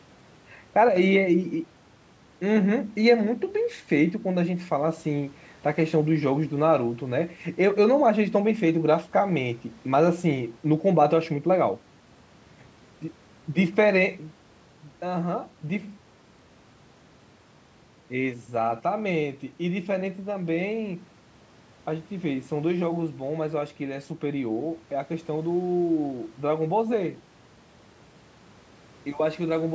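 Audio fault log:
0.89 to 0.96 s and 14.57 s to the end, one channel drops out: the level falls abruptly by about 6 dB as one stereo side likely goes silent before the mono sum. Unlike a plain gain dip, anything present only on that side vanishes rather than just getting quieter.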